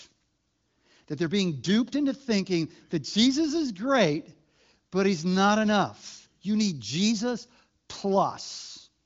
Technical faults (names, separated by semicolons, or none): none